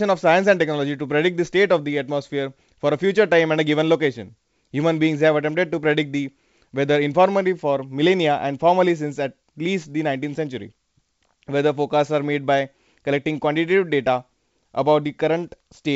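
The speech is carried by G.722 wideband telephone coding at 64 kbit/s, which is working as intended, and nothing in the signal stands out as a technical fault.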